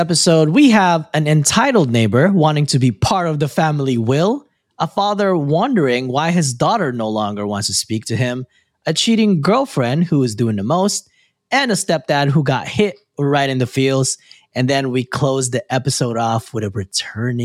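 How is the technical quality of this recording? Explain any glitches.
Nothing stood out as a technical problem when listening through this recording.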